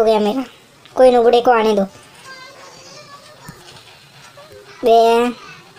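No dropouts, glitches, clipping or other transport or capture faults can be heard anywhere in the recording.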